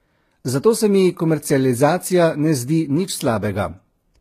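Transcoding between lossy codecs runs throughout the speech. Nothing reaches above about 14.9 kHz, and the first codec's artefacts sit under a second codec's own artefacts, most likely a low-bitrate HE-AAC pass re-encoded as Vorbis, which spends bits preserving the earlier damage.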